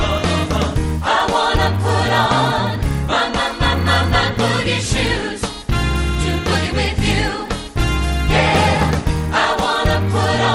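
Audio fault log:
Throughout: resampler restarted on every block. Each 10 ms block was converted from 24 kHz to 48 kHz alone, so every block edge has a small error. This gives a 100 Hz buzz that is heard only while sound is present.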